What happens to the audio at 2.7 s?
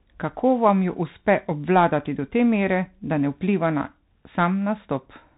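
At 2.7 s the speech is still passing through the Bluetooth CVSD headset codec, which colours the whole clip. CVSD sends a single up-or-down bit per sample with an adapting step size. Steep, loud high sounds outrun that step and distort, s sounds turn scratchy, and a granular hiss sits beneath the speech. Nothing above about 3.8 kHz survives. A spectrogram shows a hard ceiling there with a grainy noise floor below it, and the waveform looks stepped on fast transients.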